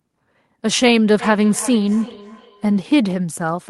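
From 1.2 to 2.94 s the speech is followed by a feedback echo between two devices: a second device in the same room on the call plays the audio back, this microphone picks it up again, and its echo canceller ignores sound it did not play itself. The repeats trail the speech by roughly 300 ms, peaking about 15 dB below it. Unlike room reverberation, which smears into a continuous tail, this returns as distinct copies at a steady spacing.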